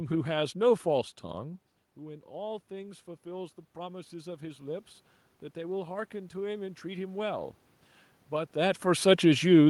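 Automatic gain rising at 1.24 to 4.92 s and 5.53 to 7.56 s: after the talker moves away around 1.5 s, the input falls by about 15 dB. The gain control then slowly adds about 6 dB, and later about 3 dB, so voice and room noise swell together.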